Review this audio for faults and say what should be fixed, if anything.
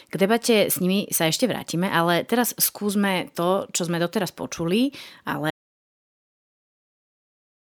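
At 1.40 s, between "debate s nimi sa" and "vrátime ale teraz skúsme", and at 4.22 s, between "skúsme to čo sme" and "počuli ale", a dropped buffer (overrun) causes a skip. A few milliseconds are lost at the first point and about 15 ms at the second. The likely cause is that the software read its input too late, so the hardware overwrote that audio and the remaining edges were joined directly. A waveform shows a sudden step discontinuity, and a spectrogram shows a thin vertical broadband line. Larger input buffers and higher capture-thread priority would prevent this.

From 5.51 s, right after "počuli ale", to the end of the clip, an audio dropout to silence leaves only silence, with no room tone. The likely cause is that the input was lost, for example through a disconnected device or a mute, while recording continued. The waveform becomes a flat line and the spectrogram turns dark. Secure connections and monitoring of the input level during recording would prevent this.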